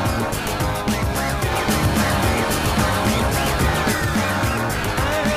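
A doubled audio track runs from 1.52 to 3.92 s: a second, full-band copy of the sound trails roughly 0.7 s behind at about the same loudness, with no decay or room colour, switching on and off abruptly, likely from a slower capture path mixed back in.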